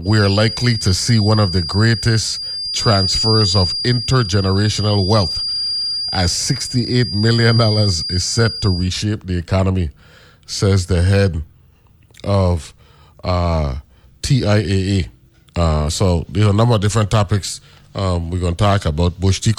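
A speech recording carries a feedback whistle from the start to 8.94 s: a thin, steady tone at 4.8 kHz sits behind the voice, roughly 10 dB below it, swelling and fading slowly in level before it stops. The likely cause is a loudspeaker-to-microphone loop held just at the edge of feedback, so gain at that one frequency is sustained but never runs away into a full howl.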